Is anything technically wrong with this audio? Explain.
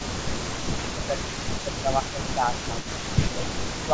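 Yes, there are two faults in this speech.

Echo leak runs from 0.00 to 3.87 s: a delayed copy of the speech trails it by 267 ms, roughly 15 dB quieter, likely because a loudspeaker's sound reached the far microphone and its echo canceller failed to remove it, sending it back.

Speech suppressed in double talk occurs at 0.31 to 0.67 s, 0.93 to 2.85 s and 3.20 to 3.94 s. The speech dips by around 10 dB, likely because the echo canceller could not tell the talker from the overlapping echo and turned both down.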